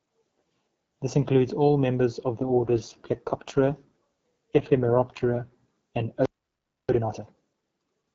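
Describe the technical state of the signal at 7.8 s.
At 7.8 s the signal is inside a time-compressed catch-up that runs from about 6.89 s to 8.05 s. After a playback stall, the player is clearing its backlog by cutting out short slices of audio and cross-fading the remaining pieces together, so the speech plays about 1.5 times faster than normal. It sounds hurried while keeping its normal pitch, over the light coding texture of the wideband AMR voice path.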